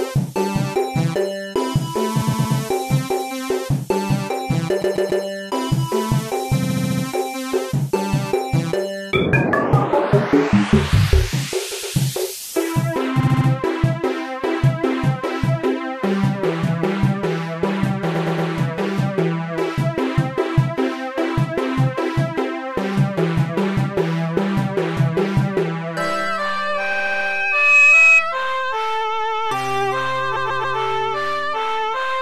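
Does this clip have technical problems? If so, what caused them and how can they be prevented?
Yes. The sound stutters at 2.21, 4.81, 6.62, 11.71, 13.19, 18.14, 26.91 and 30.35 s. These are repeated frames: short blocks of roughly 70 to 140 ms of compressed frames were written more than once and replayed several times, so each event adds about 0.23 to 0.42 s. To prevent this, fix the writer or transport so that each frame is sent and stored only once, for example by checking sequence numbers.

From 26.62 to 28.26 s a steady 2.5 kHz tone swells over roughly 0.7 s into a squeal about 10 dB above the sound. This is loudspeaker feedback squeal: the microphone picked up its own loudspeaker, and at 2.5 kHz the loop gain exceeded one. To prevent it, lower the monitor gain, move the microphone away from the speaker, or notch that frequency.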